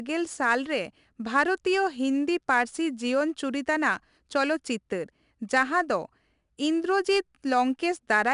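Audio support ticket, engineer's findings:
4-bit ADPCM compression across the whole speech clip: gritty hiss riding on louder syllables, plainly audible, with roughness on sharp onsets where the adaptive step size lags. No content above 10.6 kHz, which fits a rate near 89 kbps. Unlike steady background hiss, this noise rises and falls with the signal level.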